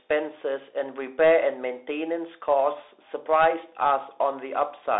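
From start to finish the speech sounds boxed-in and phone-like, with nothing above about 3.8 kHz and a thin low end, the band sitting roughly between 300 Hz and 3.7 kHz. S sounds come out scratchy, loud bright moments break into harsh distortion, and a grainy hiss runs underneath. This is the Bluetooth CVSD headset codec, which fits a 64 kbps CVSD stream: one up-or-down bit per sample with an adapting step that cannot keep pace with fast, loud changes.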